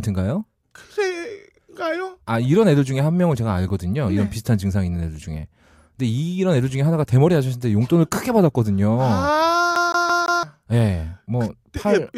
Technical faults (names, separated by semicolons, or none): CD stuck on one turn